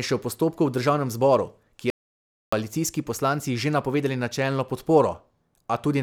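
The input was likely lost briefly, so the recorder wrote silence: an audio dropout to silence from 1.90 to 2.53 s cuts the speech abruptly, leaving 0.62 s of dead air.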